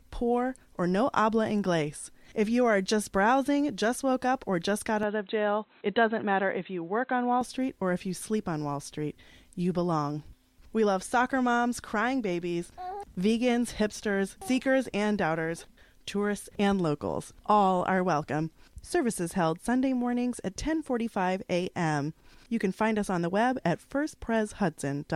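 From 5.03 s to 7.41 s the recording likely had its input switched to a poorer device, such as a second microphone or a headset's narrowband call profile, before returning to the original source. Across that stretch nothing is present above 4 kHz, so the sound turns dull and boxy, and a faint new background noise sits far beneath the signal. There is no gap at either transition, and the overall level barely changes.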